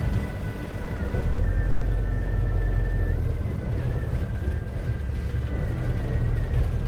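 From 0.65 to 1.83 s, repeated stalls (stutter): late packets drained the jitter buffer eight times, each gap up to 110 ms stretched with repeated sound, visible as smeared, duplicated spectrogram columns.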